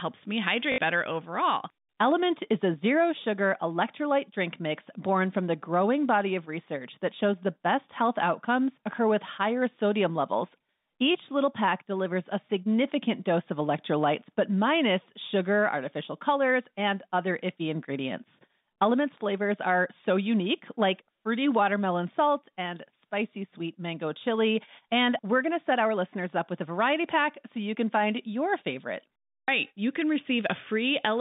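Telephone-band speech with packet loss where the last packet was repeated. About 60 ms at 0.72 s, before "better overall", and 140 ms at 29.43 s, after "can find your favorite", stutter robotically. On a spectrogram these appear as identical repeating blocks.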